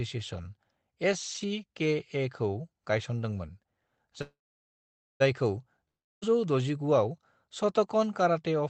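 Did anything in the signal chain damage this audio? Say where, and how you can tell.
Yes. Call audio freeze, 4.21 to 5.22 s, at the network and jitter-buffer stage. The last sound is stretched into a fading buzz that sinks to silence for most of that second. When the audio resumes it picks up exactly where it stopped, with nothing skipped, so the rest of the clip now runs about 1 s late. The likely cause is packets held up in transit, draining the jitter buffer until they finally arrived.

Long network dropout, 5.88 to 6.24 s, also at the network stage. Again the receiver carries the last sound forward as a brief decaying hiss, then sits silent for roughly 0.3 s. This time the audio comes back further on rather than where it broke off, and about 0.34 s of the sound is simply gone. The likely cause is a run of packets that never reached the receiver, so that stretch could never be played. 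Both gaps pass through the Opus call path, whose band limit sits near 8 kHz.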